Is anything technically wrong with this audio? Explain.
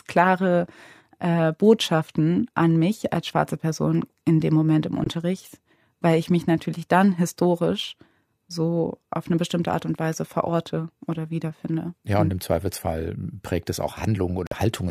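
Yes. Corrupt frame muted: at 5.04 s (0.11 s) and 14.47 s (0.07 s), the decoder rejected damaged compressed frames and silence replaced them, fitting about four and two frames. Each is an abrupt dropout with timing intact, a flat line in the waveform and a clean vertical gap in the spectrogram.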